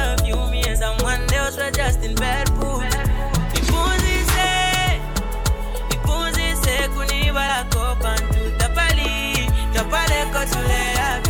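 At 0.75 s, again at 3.53 s, and from 7.48 to 7.50 s, a brief glitch cuts through the audio. This is damaged data in a compressed stream: bytes in the coded file were corrupted, so the decoder misread those frames, lost sync and hunted for the next valid frame header. Each event lasts roughly 16 to 20 ms.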